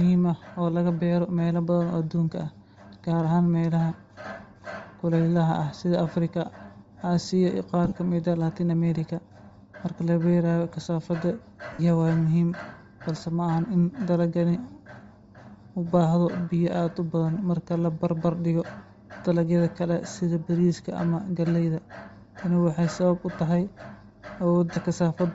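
Speech runs the whole way with a breathy, grainy edge and a thin, noisy top end, likely Bluetooth LC3 compression at a low rate, around 32 kbps with 7.5 ms frames, where the upper spectrum gets zeroed and noise-filled. There are also lost LE Audio frames, where the decoder repeats the last spectrum with random signs and the sound smears into noise. From 7.85 to 7.94 s about 60 ms drops out in bursts spread over 90 ms, the longest stretch roughly 30 ms. Right after "la beerayo kasaafada" a 52.5 ms gap hits at 11.73–11.80 s, and a short 22.5 ms one comes at 24.74–24.77 s.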